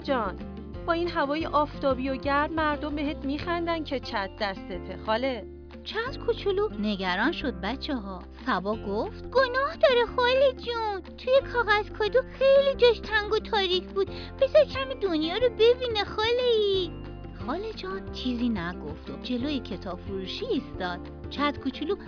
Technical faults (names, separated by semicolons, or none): none